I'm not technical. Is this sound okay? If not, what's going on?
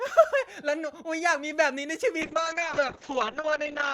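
No. There's a call bitrate drop from 2.23 seconds to the end of the clip. The connection appears to have weakened, so the call squeezed the speech into far less data. It sounds rougher and more muffled, losing its crisp top end, and stays worst for about a second.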